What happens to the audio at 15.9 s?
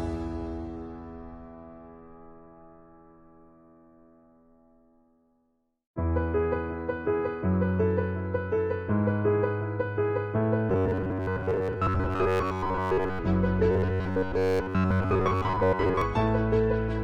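At 15.9 s the audio is inside a stretch of robotic sound from repeated short buffers, running from 13.71 to 16.02 s. Audio likely arrives too seldom, so roughly 10.7 ms chunks repeat for most of the span. This imposes a rigid, metallic 93.8 Hz buzz. On a spectrogram it shows as evenly spaced harmonic lines at multiples of 93.8 Hz, and the waveform repeats identical short cycles.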